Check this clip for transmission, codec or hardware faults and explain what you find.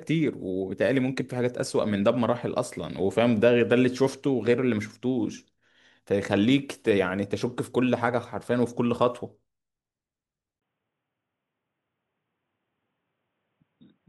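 One fault stands out. From 10.60 s, after a 20 ms gap, the speech turns dull and about 5 dB quieter, with nothing above 3.8 kHz: likely an input switched to a poorer device.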